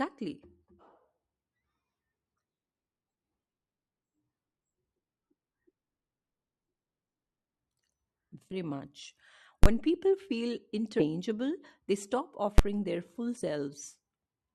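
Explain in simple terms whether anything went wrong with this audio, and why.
At 8.51 to 8.56 s, 10.99 to 11.04 s and 13.41 to 13.44 s, the speech suddenly jumps ahead, leaving out a short stretch each time: about a tenth of a second, about a fifth, and less than a tenth. These are compressed frames skipped: chunks of the compressed audio, which fit a 20 ms frame length, were missing or rejected by the player.

Two very loud bangs interrupt the speech, one from 9.64 to 9.66 s and a shorter one at 12.58 s. These are invalid numbers at full scale. A calculation produced impossible values, which were forced to an extreme level far beyond the loudest parts of the speech. Each burst is only as long as the processing block it hit, about 21 ms and 11 ms, which fits blocks of 1024 and 512 samples. That is too short to hear as anything but a single bang.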